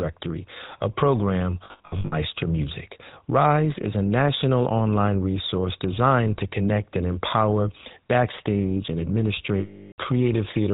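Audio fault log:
throughout: GSM full-rate codec. The audio is band-limited with nothing above 4 kHz and carries a plainly audible buzzy, gravelly roughness, which fits the 13 kbit/s GSM full-rate codec. The codec rebuilds speech from a vocal-tract filter driven by a regular pulse train that keeps only one excitation sample in three, so fine detail is replaced by a coarse, periodic buzz.
1.64–2.15 s: lost GSM frames. Over about 480 ms the speech breaks into a rough, metallic ring in short bursts, none much longer than about 70 ms, with about 340 ms lost in total. This fits roughly 17 dropped 20 ms frames. Each gap is filled by repeating the last good frame's settings, so the sound briefly freezes and rings before clean frames resume.
9.60–9.98 s: lost GSM frames. A single continuous loss of about 380 ms, which fits roughly 19 consecutive frames. The last good frame is held as a metallic ring, and because the gap is longer than about a third of a second, the concealment is cut to silence before the audio returns.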